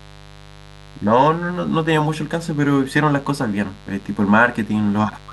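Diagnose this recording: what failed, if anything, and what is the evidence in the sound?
Mains buzz is getting in at the analogue wiring stage. There's a steady, raspy buzz under the speech for the whole clip, sitting roughly 25 dB down. Sharp switching spikes, twice per 50 Hz cycle, pile up harmonics reaching well into the kHz range, probably from a dimmer, rectifier or missing shield.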